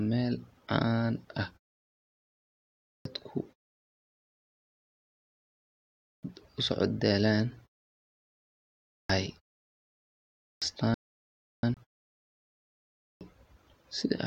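It's a speech recording with a clipped start after a pause five times, at 2.6, 5.82, 8.66, 10.13 and 12.74 s: the output device dozes off in the silence and swallows about 0.41 to 0.49 s of the next phrase while it wakes. There's also a rebuffering stall from 10.94 to 11.63 s, where the player ran dry and everything freezes to silence for about 0.69 s before carrying on exactly where it stopped. Right after that, a CD skip at 11.74 to 11.77 s gives a brief mute of roughly 30 ms as the laser hops to another turn of the disc and the sound jumps.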